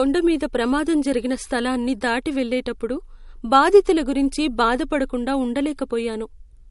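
MP3 compression runs through the whole clip, likely from encoding at too low a rate, with damage that is plainly audible. Nothing remains above 11.2 kHz, which fits a bitrate near 48 kbps. Weak frequency lines flicker between frames, leaving the speech watery and swirly, with metallic chirps on s sounds.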